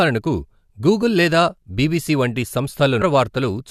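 At 3.01 s the speech jumps ahead with a blip, likely a stream segment skipped, showing an abrupt waveform break and a vertical spectrogram line.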